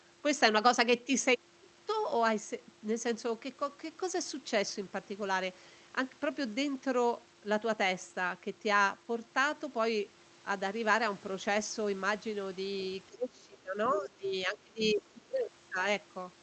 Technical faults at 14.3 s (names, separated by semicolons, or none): speech suppressed in double talk; other side's voice leaking through